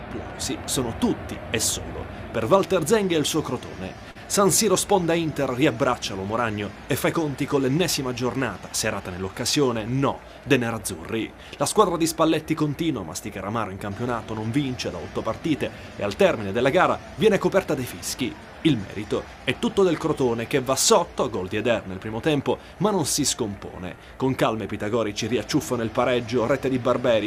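At 4.11 to 4.17 s the audio holds one sound about 38 ms too long, a short stall from a late packet: the jitter buffer ran dry, the last sound was stretched, and playback resumed where it stopped, losing nothing but running 38 ms later. A spectrogram shows a brief smeared, flattened band there, and a waveform shows repeated cycles.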